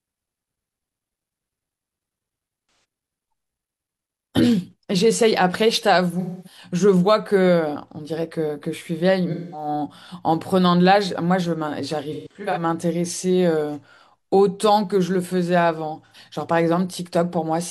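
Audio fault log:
2.67–2.84, 6.20–6.61, 9.31–9.68, 12.12–12.62, 16.06–16.17 s: AAC frame loss with concealment. Gaps of 85 to 256 ms are patched from the last good spectrum, so the speech smears into a noisy, phasey wash instead of dropping to silence or clicking like a raw dropout. At 12.12 s the losses are scattered across about 430 ms, the longest run near 150 ms.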